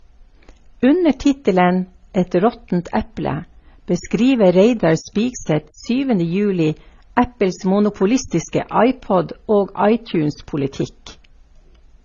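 From start to finish the speech sounds like it went through transcoding between lossy codecs, likely an MP3 at 32 kbit/s re-encoded as AAC-LC at 24 kbit/s, leaving nothing above 7 kHz and stacked, mushy artefacts.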